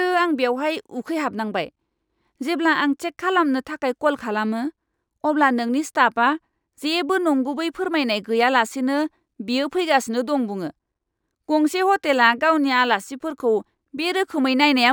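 Throughout the speech, imaging from linear upsampling is audible. The sound points to a 24 kHz source raised to 48 kHz by straight-line interpolation. That dulls the top end and leaves a mirrored image between 12 and 24 kHz, roughly 35 dB down, heard as faint metallic shimmer on sibilants.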